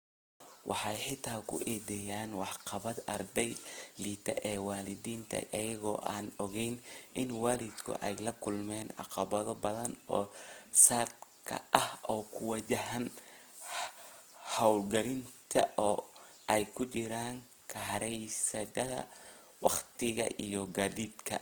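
All the way through, the speech turns grainy and rough, which sounds like Opus compression, likely in its music mode at a starved bitrate near 16 kbps.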